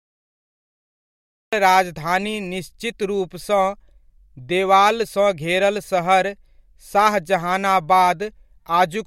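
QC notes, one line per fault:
0.00–1.53 s, cut-off start: the clip opens on silence and the speech enters abruptly at 1.53 s, already partway through a sound, with no natural attack or fade-in, because the recording or stream began late and the onset of that sound was never captured.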